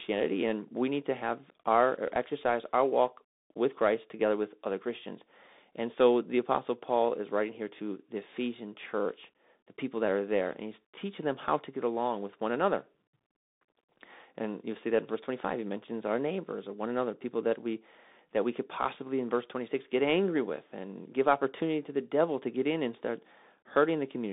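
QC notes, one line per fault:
Throughout: Bluetooth CVSD headset codec. The speech sits in a 200 Hz to 3.7 kHz band with nothing above 3.8 kHz. Unlike plain telephone band-limiting, a granular hiss runs underneath, s sounds turn scratchy, and loud high sounds distort as the one-bit step lags behind, which fits a 64 kbps CVSD link.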